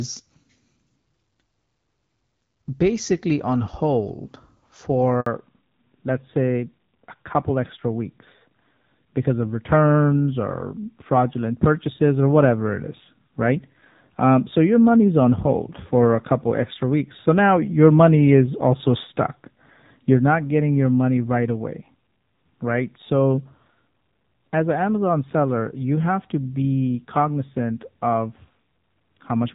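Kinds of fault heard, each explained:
Handover gap: The call gets passed from one network to another, and for a moment nothing comes through at all. Here the sound drops out at about 5.20 s and stays silent for roughly 60 ms before the new link picks up at 5.26 s. It's short, but it's a clean hole rather than a glitch, and whatever was said in that sliver is simply gone.
Fallback to narrowband: Right after that handover at 5.26 s, the call loses HD Voice and drops to an older narrowband codec for the rest of the clip. Before the switch the wideband speech is clear, with only light coding damage, consistent with AMR-WB at around 12.65 kbit/s. Afterward nothing above 4 kHz survives, so the speech goes duller and rougher, which fits AMR-NB at about 7.4 kbit/s.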